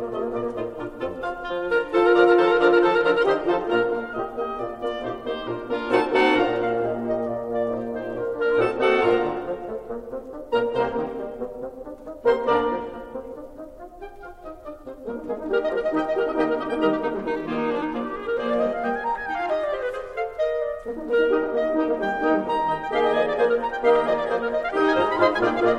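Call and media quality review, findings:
No findings: the music clip shows no faults in this call and media quality review.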